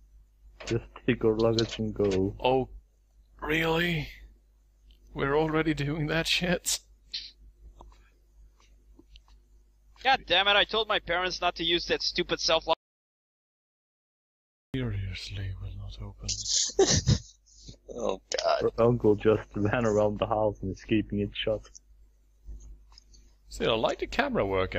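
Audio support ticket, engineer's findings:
Audio dropout to silence, 12.73 to 14.74 s. Signal cuts dead mid-flow, about 2 s of silence, no room tone, then snaps back. Likely input lost upstream, device or link drop, while the recorder kept writing silence. Content in the gap is unrecoverable.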